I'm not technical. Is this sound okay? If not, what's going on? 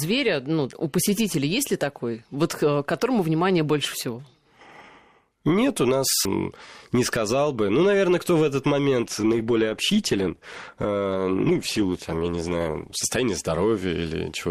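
No. From 9.01 to 13.01 seconds the speech suddenly sounds duller and more artificial, with nothing above about 12.2 kHz. This is an adaptive stream at a lower bitrate. The connection slowed, so a lower-quality version played, without any gap.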